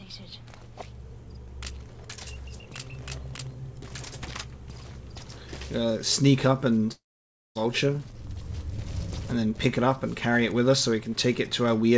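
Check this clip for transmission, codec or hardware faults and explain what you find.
One transmission fault is audible. From 6.92 to 7.57 s there is a long network dropout, likely caused by packets failing to arrive. The receiver extends the last sound as a fading buzz or hiss, leaving about 0.56 s of near-silence. About 0.64 s of audio never returns. Nothing above 8 kHz is present, which fits the G.722 call codec at 64 kbps.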